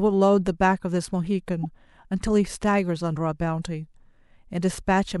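A corrupt frame decoded at 1.63 to 1.65 s cuts briefly into the speech as a short, bright blip. Damaged bits inside what sounds like a single compressed frame were passed to the decoder, which rebuilt it from misread gains and codes. For roughly 24 ms, energy lands at frequencies that don't belong there, peaking somewhere near -20 dBFS, as a chirp-like squeak before clean decoding resumes with the next frame.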